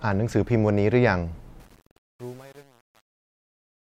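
Speech fades out over the latter part of the clip, starting at around 1.6 s, and the fade carries truncation distortion from 1.6 s to the end, worst from 1.72 s onward. The fading stage appears to keep too few bits and add no dither, which fits about 8 bits. As the level drops, the quiet tail turns gritty. A zoomed waveform shows coarse square steps, and a spectrogram shows broadband hash that tracks the signal.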